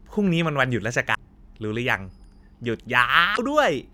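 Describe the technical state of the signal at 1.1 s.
At 1.11 s the speech hits damaged data in a compressed stream, lasting until 1.17 s. Corrupted bytes make the decoder misread those frames and lose sync while it hunts for the next valid frame header. The result is a brief glitch of about 56 ms.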